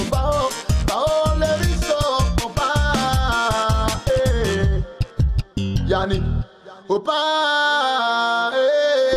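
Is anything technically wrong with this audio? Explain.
No, nothing in the signal stands out as a technical fault; the audio holds steady throughout without any audible break, distortion or dropout.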